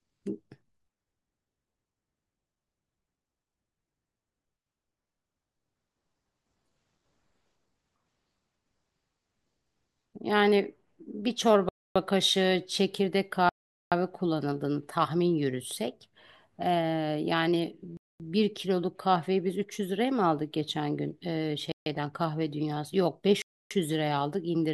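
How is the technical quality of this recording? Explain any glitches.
The speech is interrupted five times by brief dead silences, all from 11.7 s onward: 11.69 to 11.96 s, 13.49 to 13.92 s, 17.97 to 18.20 s, 21.72 to 21.86 s and 23.42 to 23.71 s, lasting from 0.14 to 0.43 s. These are likely Bluetooth stalls: interference delayed packets, the headphones' buffer emptied, and playback froze until resent data arrived. Each gap is true silence, with the speech resuming afterwards. A plain dropout with concealment would instead smear or buzz.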